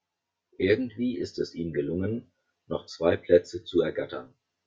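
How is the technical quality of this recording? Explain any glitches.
Not great. The speech has a hollow, phasey quality from start to finish, caused by channel delay (comb filtering). One channel runs around ten milliseconds behind the other, and when the two are folded to mono, whatever they share cancels at regularly spaced frequencies, starting somewhere near 40 Hz and repeating up the spectrum. Those fixed notches carve out parts of the voice, so it comes across hollow throughout.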